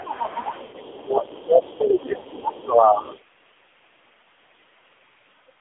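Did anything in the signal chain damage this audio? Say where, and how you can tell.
Yes. Four kinds of damage are audible, all in the call path.

Codec stage: AMR narrowband mobile codec. The whole clip sits in a band of roughly 250 Hz to 3.6 kHz. Nothing reaches above 4 kHz. The speech is buzzy and synthetic, with heavy coding damage throughout. That thin, pulse-driven texture points to a low AMR-NB mode, which fits about 5.9 kbps. At that rate the vocal-tract model has too few bits to sound natural.

Call processing: the other side's voice leaking through. A faint second voice is heard from 0.0 to 0.99 s, about 20 dB under the talker. It returns in short scraps at 1.35 to 1.45 s and 1.62 to 1.77 s, well below the speech. It is loudest from 1.98 to 2.61 s, about 15 dB down, and comes back at 3.03 to 3.19 s. Residual loudspeaker echo that the canceller failed to remove is the likely cause.

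Network stage: lost AMR speech frames. At 0.64 to 0.81 s the sound smears and sags for about 80 ms, which fits four lost 20 ms frames. A second gap at 2.18 to 2.27 s lasts about 60 ms, which fits three frames. In each gap the decoder repeats its last settings at falling gain. The speech then comes back weak or rough for a moment.

Call processing: speech suppressed in double talk. From 0.92 to 3.02 s the talker's level keeps pumping down, for about 2 s in total. The deepest dips reach around 25 dB. The likely cause is the echo canceller hearing both sides at once and attenuating everything to be safe.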